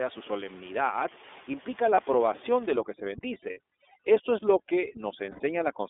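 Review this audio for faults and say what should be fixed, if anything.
iLBC codec, throughout: the whole clip passes through this narrowband codec, so nothing is heard below about 300 Hz or above 3.6 kHz. Each frame's excitation is coded on its own, which gives the speech a plainly audible rough, synthetic edge. This fits the 13.33 kbps mode with 30 ms frames.

Lost iLBC frames at 1.94–1.99 s (30 ms), 3.50–3.59 s (60 ms) and 5.31–5.41 s (90 ms): the first falls between "su solemnidad implica" and "aprobación de". In each gap the decoder repeats the last pitch cycle mixed with noise, heard as a short buzzy, held vowel. The longer gaps fade further, which fits one, two and three lost frames. Speech recovers at once afterward.

Overdone noise removal from 2.73 s to the end, starting just after "aprobación de": the room noise, which sits about 23 dB below the speech, is suppressed too hard. 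Bands near the noise estimate are switched down or off, leaving near-silence with twinkling specks.

To fix these, use a wideband codec with forward error correction or a jitter buffer on a more reliable network path, and lower the noise reduction strength so it stops cutting into the speech.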